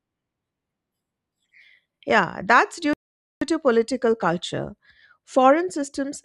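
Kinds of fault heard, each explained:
Rebuffering stall: at 2.93 s, just after "that's due", the speech drops to silence for about 0.48 s and picks up again at 3.42 s with "to political culture", continuing exactly where it left off. The player exhausted its downloaded audio and paused until more data arrived, so nothing is skipped or repeated. The gap simply inserts roughly half a second of dead air into the sentence, stretching the clip's running time.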